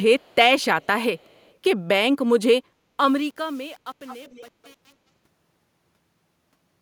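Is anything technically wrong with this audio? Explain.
Yes, there are two problems. Echo leak appears at 0.19–0.35, 0.82–0.86, 1.18–1.54, 4.06–4.45 and 4.63–4.73 s: a faint, discrete copy of the speech trails it by 246 ms early on and 212 ms later. Very low at first, it rises to about 20 dB below the speech near 4.1 s. The likely cause is a far-end loudspeaker whose echo canceller let some of its microphone pickup return. Unlike room reverberation, this is a separate delayed repeat, not a smooth decay.

Truncation distortion on a fade runs from 2.73 s to the end and is worst from 2.87 s. The level stage keeps too few bits, which fits an undithered 8-bit path. As the signal shrinks toward the smallest steps, the tail turns gritty. That graininess is what separates it from a clean fade.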